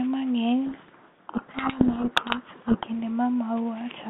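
Speech over a G.726 line at 32 kbit/s, band-limited to roughly 150 Hz to 3.6 kHz. From 0.66 s to 2.87 s there is a codec payload misread. The speech sinks under harsh, grinding distortion. The two ends disagree on the bit order of the G.726 code words. So the decoder takes each code word with its bits reversed and rebuilds the wrong differences. At 2.87 s the packing matches again and the speech returns.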